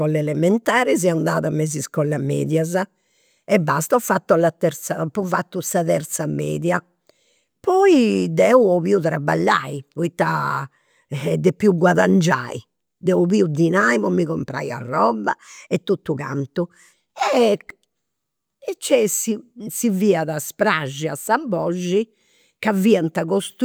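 Speech recording, with no technical faults audible anywhere.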